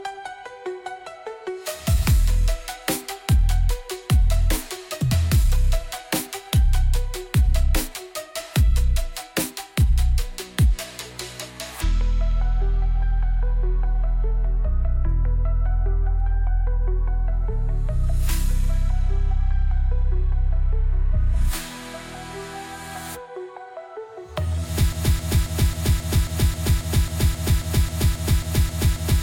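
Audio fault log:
24.93–29.22 s, broken-record loop: a fragment of about 0.27 s repeats exactly and back to back, 16 times, and runs to the end of the clip, so the audio that should have followed is gone. The likely cause is a player, encoder or stream that stalled and kept resending the last buffer it held. On the waveform, identical blocks tile at a 0.27 s spacing. On the spectrogram, the same pattern stamps out in vertical stripes at that interval.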